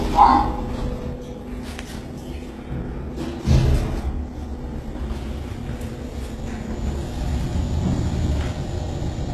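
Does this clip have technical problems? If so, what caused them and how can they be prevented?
Yes. The treble throughout the clip sounds gritty and metallic, with nothing above 12.3 kHz, which fits a very low bitrate around 16 kbps. The likely cause is HE-AAC compression: its band replication copies lower frequencies upward to fake the top end, so the highs fail to match the original. Encoding at a higher bitrate, or with plain AAC, would prevent this.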